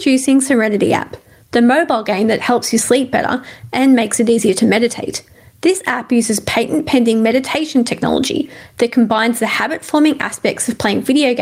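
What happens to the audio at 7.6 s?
At 7.6 s the audio is in the middle of gain pumping that runs through the whole clip. The level swings by around 15 dB. Loud and quiet passages sit unnaturally close together, giving a squashed, breathing quality. The likely cause is gain set far too high at the microphone, with a fast limiter or compressor clamping down on every peak.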